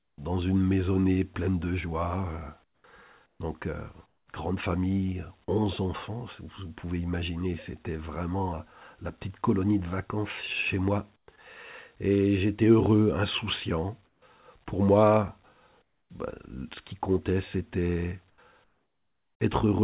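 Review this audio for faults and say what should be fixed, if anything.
The pauses at 0.0–0.18, 2.64–3.4, 4.06–4.28, 11.16–11.28, 14.06–14.22, 15.82–16.1 and 18.3–19.4 s have comfort noise in place of the background. The real room tone, which sits about 41 dB under the loud parts, drops out and a flat, featureless hiss takes over, about 8 to 16 dB quieter. That's likely discontinuous transmission: the sender goes quiet in gaps and the receiver fills in synthetic noise. The band tops out at 4 kHz, which fits a narrowband G.711 leg. Turning off DTX/VAD on the sending side would keep the real background running through the pauses.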